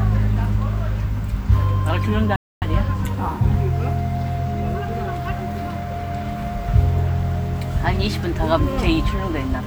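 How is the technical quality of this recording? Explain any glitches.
The recording has one clear glitch, a playback stall. From 2.36 to 2.62 s, the player likely ran short of data or was blocked, so the output fell silent for 258 ms before the sound resumed.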